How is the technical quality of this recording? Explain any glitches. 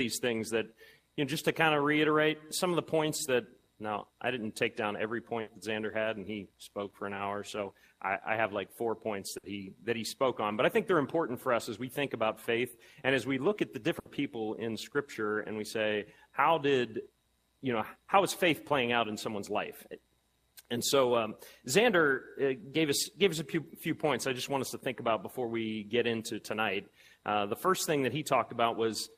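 The recording has three short dropouts. They come from a burst of packet loss at 5.41 to 5.50 s, 9.37 to 9.46 s and 13.99 to 14.08 s. Each time, consecutive packets failed to arrive in time. The receiver spent about 60 ms stretching the last sound it had and fading it out, which comes across as a brief held buzz or dying hiss. Then it skipped ahead, so roughly 60 ms of real audio is simply gone at each point.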